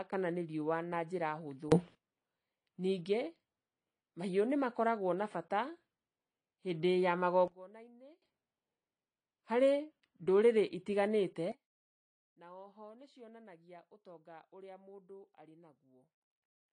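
AAC compression runs through the whole speech recording: nothing survives above 10.2 kHz, and the plainly audible dulling and smeared, fizzy sibilants fit likely AAC-LC coding at around 32 kbps. A sudden gain jump occurs three times, likely from a digital gain setting applied without a ramp, so voice and background noise shift together: up about 24 dB from 1.72 to 1.95 s, down about 22 dB from 7.48 to 8.22 s after "hĩndĩ ya", and down about 21 dB from 11.52 s to the end after "ndũrĩrĩ itiganĩte".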